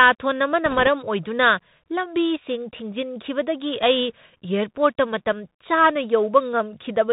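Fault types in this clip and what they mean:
Bluetooth CVSD headset codec, throughout: one-bit adaptive delta coding, fitting a 64 kbps link, removes everything above 4 kHz, leaving scratchy s sounds and granular hiss.
Bit errors on a Bluetooth voice link, 0.66 to 0.87 s: roughly one percent of bits flip, each small and fading fast, giving a rushing crackle rather than clicks.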